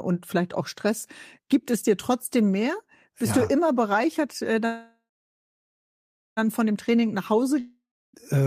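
A speech recording with three network problems near the end. From 4.65 to 6.39 s there's a call audio freeze: the last sound carries on as a fading buzz, then about 1.3 s of silence, and the speech resumes exactly where it stopped. Nothing is lost, but roughly 1.7 s of gap gets inserted, likely because packets were held up and the jitter buffer ran dry. Right after, from 6.96 to 7.44 s, there's a jitter buffer slow-down. The receiver repeats single pitch periods to rebuild its reserve, stretching that half-second by 47 ms, so it plays at about 92% speed with the pitch unchanged and sounds a bit drawn out. Then from 7.60 to 8.15 s a long network dropout hits. The sound trails off as a fading hiss into about 0.32 s of silence, and when audio returns, around 540 ms of speech has gone missing.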